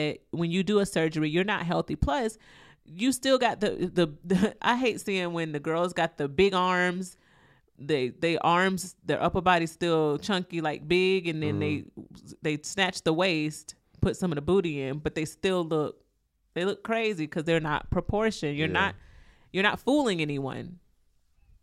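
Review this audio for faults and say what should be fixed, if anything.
No faults are audible here; nothing needs fixing.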